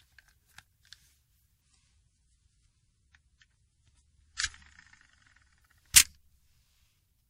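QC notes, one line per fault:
1.61 to 5.61 s, adaptive stream at a lower bitrate: for about four seconds the stream drops to a cheaper version, then snaps back. Everything above roughly 10.4 kHz just vanishes, so the top end goes dull and a bit swirly and watery, with more obvious codec smearing on transients. The switch is abrupt both ways with no gap, which fits a connection slowdown forcing a step down from something like 128 kbit/s MP3 to around 32 kbit/s.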